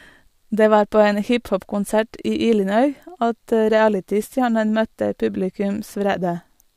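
Two devices, likely running on separate unsynchronised clocks drifting apart by something like 150 ppm, force a single sample to be dropped or repeated roughly every 0.15 s. From 0.14 s to 6.67 s this produces clock slip clicks, a faint, steady ticking beneath the speech.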